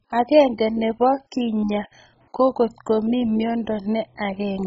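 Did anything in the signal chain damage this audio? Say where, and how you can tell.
Yes. The damage is at the codec stage, most likely MP2 (MPEG Layer II) compression starved of bits, which fits a rate around 16 kbps. Throughout the speech the top end is missing, with nothing above 7.5 kHz, because the encoder has switched off its upper sub-bands. The bands it keeps are so coarsely quantised that the sound turns dull, with a gurgling, granular distortion. Bands flickering in and out make it churn from moment to moment.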